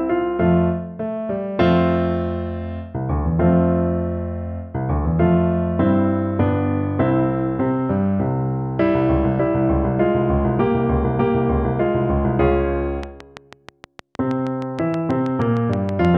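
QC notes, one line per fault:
13.03–16.06 s, train of clicks: around twenty near-identical ticks at a steady 6.3 per second, loud over the sound, likely interference; regular spacing distinguishes it from random crackle.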